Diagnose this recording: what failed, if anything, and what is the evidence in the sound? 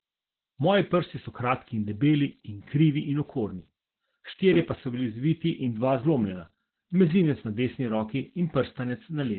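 The converter stage shows converter idle tones throughout: a whistle near 7 kHz, about 30 dB below the speech, most audible in pauses. An undithered delta-sigma converter settles into repeating bit patterns at low levels.

The codec stage shows heavy Opus voice compression across the whole clip. The speech is muffled, hoarse and slightly robotic, with nothing above 4.2 kHz, which points to narrowband SILK coding at around 8 kbps. Coarse excitation coding over 20 ms frames causes the roughness, and a spectrogram would show a hard ceiling at 4.2 kHz.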